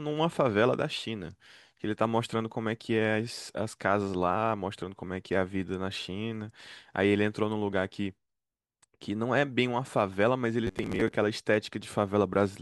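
Speech, with a short burst of robotic sound from repeated short buffers between 10.67 and 11.12 s. Over that stretch the voice collapses into a rigid, metallic buzz pitched at 93.8 Hz that still loosely tracks the speech. The likely cause is audio arriving too slowly, so playback keeps re-looping a fragment of about 10.7 ms (one period of the buzz) while roughly half of the real signal is skipped.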